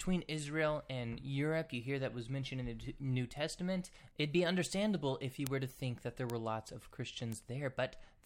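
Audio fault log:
5.47 s, 6.30 s, 7.32 s: bit error spikes. A flipped bit makes a sample or two jump sharply and snap back. Each is a single broadband tick, unrelated to the speech, after "be understandable if you" (about -9 dBFS), between "think that there" and "lots of", and after "lots of" (both about -21 dBFS).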